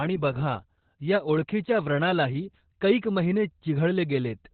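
From start to finish the clip carries Opus voice compression at a very low rate, which fits an 8 kbps narrowband SILK setting. The coarse excitation coding and narrowed band leave the speech muffled, hoarse and slightly robotic, with nothing above 4.4 kHz.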